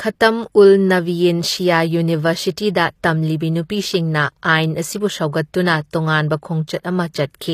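Speech with HE-AAC compression damage running through the whole clip: the top end is bright but synthetic, with sibilants turning gritty and metallic, and nothing above 14.9 kHz. This is likely spectral band replication rebuilding the treble from lower bands, which fits a low bitrate around 24 kbps.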